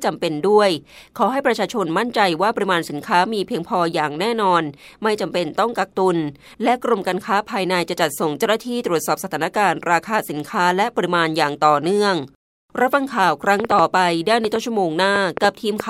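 Interference from nearby equipment or a faulty connection or power supply is likely injecting a train of clicks from 13.60 to 15.81 s: around ten similar pulses, about 4.1 per second but unevenly spaced, popping about 15 dB above the speech, pauses included.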